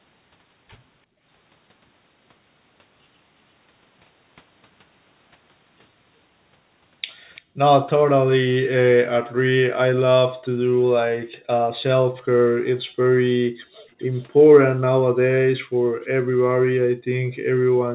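The echo canceller clamped the microphone while the far-end loudspeaker played, producing background gated by the echo canceller: the room sound drops by about 40 dB at 1.06–1.25 s, 7.42–7.58 s and 9.31–9.42 s, then stays gated from 10.68 s to the end, leaving dead gaps.

At 7.35–7.42 s a faint repeat of the speech arrives 341 ms late, and at 13.99–14.25 s a much fainter one follows 391 ms behind. Both are likely an echo leak, where the loudspeaker's sound escaped cancellation and was sent back as a delayed copy.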